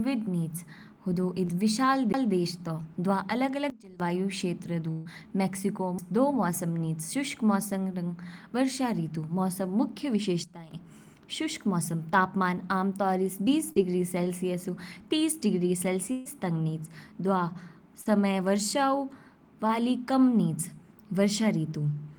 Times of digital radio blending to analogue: none

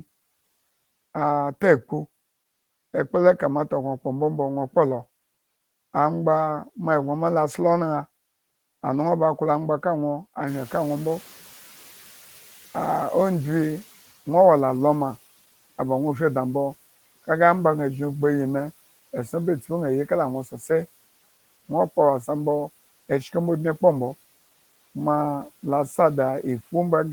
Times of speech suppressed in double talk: none

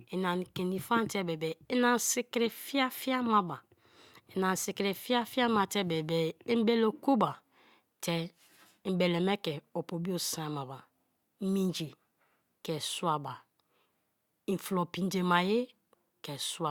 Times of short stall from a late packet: none

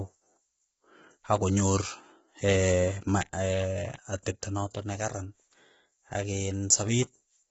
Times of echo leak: none

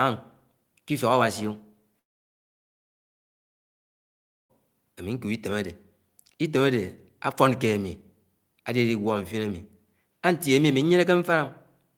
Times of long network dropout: 1.99-4.51

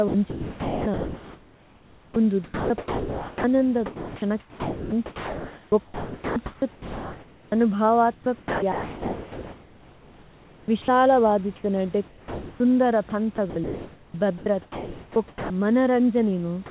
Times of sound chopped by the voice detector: 0.08-2.16, 2.44-3.44, 3.86-7.52, 8.14-10.88, 13.10-15.50

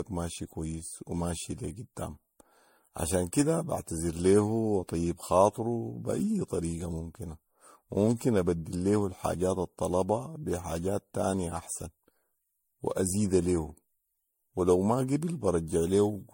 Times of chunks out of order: none

